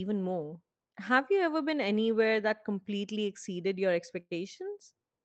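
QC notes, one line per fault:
4.19–4.33 s, burst of packet loss: several consecutive packets arrived too late or not at all. The receiver stretched the last sound for 115 ms, fading it, then went silent for 30 ms. Playback resumes with 120 ms of audio missing.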